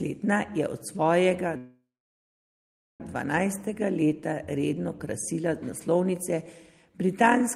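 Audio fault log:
1.57–3.02 s, call audio freeze: likely stalled packets drained the jitter buffer after "je od svojega"; sound fades into about 1.2 s of silence, then resumes 1.4 s late with nothing lost.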